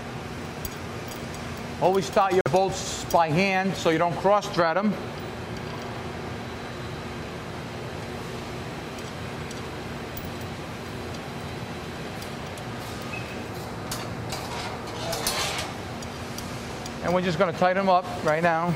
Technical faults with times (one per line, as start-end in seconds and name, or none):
2.41-2.48 Bluetooth stall